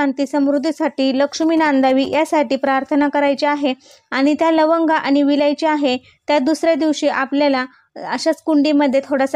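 From 1.42 s to 2.15 s a galloping dit-dit-dit of short buzzes cuts in, pitched at about 217 Hz and sitting roughly 20 dB under the main sound. These are GSM signalling bursts. A nearby 2G phone was exchanging brief groups of radio pulses with the network, and the audio circuitry picked them up and rectified them. Its 217 Hz pulse rate turned directly into that buzzing tone, with the gaps between groups giving the galloping rhythm.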